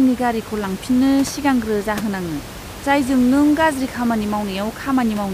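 A speech recording with nothing technically wrong in it, the room's background noise sitting about 15 dB below the speech.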